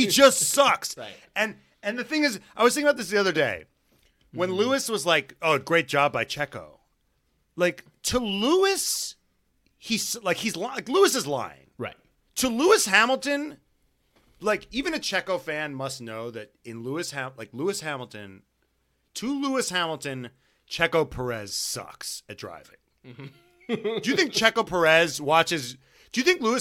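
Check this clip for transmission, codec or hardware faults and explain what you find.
Nothing faulty can be heard anywhere in this speech.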